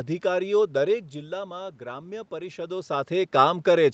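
From 0.88 s to 3.02 s the automatic gain rises. The input level drops by about 12 dB, which matches the talker moving away from the microphone around 1 s. The gain control reads this as a quiet input and slowly raises its gain by about 6 dB over roughly two seconds. Voice and room noise swell together, so the background gets audibly louder while the speech only partly recovers. This all happens within the call's band, which stops at 8 kHz.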